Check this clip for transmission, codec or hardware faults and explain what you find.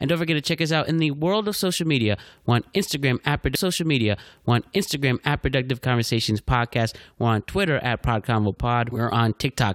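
One fault is present: a stream segment repeated. From 3.54 s to 5.54 s, about 2.0 s of speech plays a second time. The player fetched or queued the same segment twice. A small blip marks the jump back before the section repeats.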